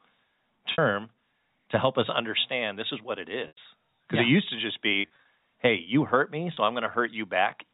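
Packet loss with pitch repetition at 0.72–0.78 s (60 ms), 3.48–3.57 s (90 ms), 5.01–5.25 s (scattered, runs up to 30 ms) and 6.54–6.57 s (30 ms): the receiver repeats the last pitch period, so the shorter gaps become a brief held, buzzy tone rather than a clicky stutter, while the 90 ms gap fades into silence before the speech returns.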